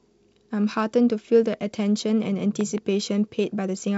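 A sharp loud pop cuts through the speech at 1.54 to 1.56 s, peaking a little above it, then a double pop from 2.61 to 2.80 s rises well above the speech, which carries on underneath. These are likely voltage pulses from a switch, static or a driver glitch.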